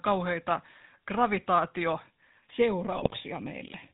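Throughout, the speech has passed through a GSM full-rate codec, which models the vocal tract and drives it with a sparse, regularly spaced pulse excitation at a rate that points to 13 kbps. Nothing survives above 4 kHz, and the voice carries a buzzy, gravelly roughness that is plainly audible.

From 2.50 s to the end, one channel runs late by roughly a third of a millisecond before the two are summed to mono. This channel delay causes comb filtering: cancellations at evenly spaced frequencies, the first around 1.5 kHz, which give a hollow, phasey colour.

Between 2.92 s and 3.14 s, GSM bit errors corrupt the decoder's filter, pitch and gain parameters across a run of frames. The level and spectrum lurch from frame to frame, and the voice breaks into squawks, pops and gargling over that span.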